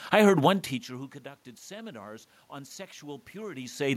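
From 0.89 s to 3.95 s there is automatic gain rising. After a talker movement near half a second drops the input by about 22 dB, the gain control slowly adds about 5 dB, so voice and room noise swell together.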